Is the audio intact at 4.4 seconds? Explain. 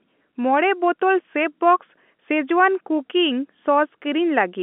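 Yes, at 4.4 seconds the speech is intact, carried on a normal telephone line with G.711 coding that keeps the sound within the usual band up to about 3.5 kHz.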